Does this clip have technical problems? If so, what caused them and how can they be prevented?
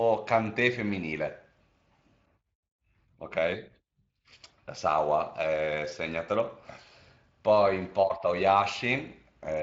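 No, there are no technical problems to fix here. The speech carries the mild, slightly grainy texture of the Speex codec, consistent with a rate of around 24 kbps, and its content stops at 7.6 kHz.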